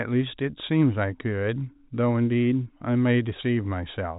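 No technical faults can be heard anywhere in this speech recording. It has come through G.711 telephone coding, so the sound stops at about 3.8 kHz, the usual narrow telephone band, and any grain from the 8-bit logarithmic coding is faint at most.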